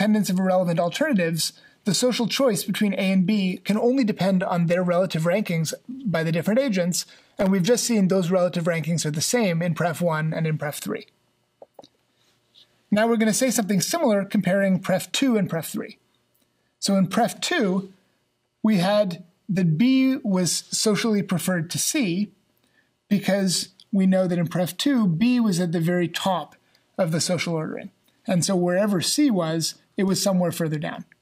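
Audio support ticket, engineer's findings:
Processor overload crackle, 6.97 to 7.47 s. Gritty tearing burst for about half a second, then clean. CPU/audio callback missing deadlines: a few dozen very short dropouts, which fits buffers of around 1.5 ms, each gap filled with silence. Waveform: rapid run of hard-edged silent notches chopping the signal. Spectrogram: dense vertical broadband streaks across all frequencies, confined to that window.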